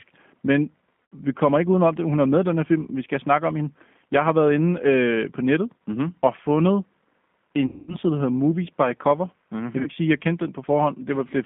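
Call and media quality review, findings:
G.729 codec, whole call: band-limited to roughly 150 Hz–3.5 kHz, speech rough and a bit synthetic, clearly audible. It fits 8 kbit/s G.729A, which rebuilds each 10 ms frame from a vocal-tract filter, pitch predictor and sparse pulses.

VoIP packet loss concealed by the speech codec at 1.12–1.15 s, 7.66–7.96 s and 9.82–9.89 s: buzzy, stretched, fading tone, then weak audio for a moment after recovery. The gaps fit about 80, 220 and 40 ms lost. The decoder extrapolates the last frame and ramps gain down.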